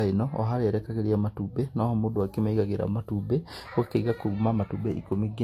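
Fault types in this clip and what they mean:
Transcoding between lossy codecs: the speech has nothing above 16.6 kHz and carries two mixed kinds of coding smear, likely from HE-AAC re-encoded as Vorbis.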